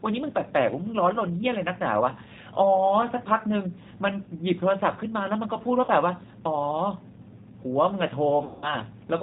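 Speech that sounds muffled, slightly rough and synthetic throughout, with nothing above about 4 kHz, which points to the G.729 codec at around 8 kbit/s. This narrowband speech codec rebuilds each short frame from a vocal tract filter, a pitch predictor and a handful of pulses rather than the waveform itself, which produces the dull top end and the plainly audible mechanical grain. Two dropouts show VoIP packet loss concealed by the speech codec. From 5.85 to 5.90 s, about 30 ms of sound, likely a single lost packet, smears into a brief buzzy or noisy stretch before recovering. From 8.44 to 8.79 s, a much longer gap of about 180 ms, consistent with a run of several lost packets, turns into a sustained buzzy or noisy stretch that fades. In both cases the decoder fills the gap by extending the last pitch and filter at steadily lower gain, and because each frame depends on the previous one, the sound stays weak or distorted for a short while after the real audio resumes.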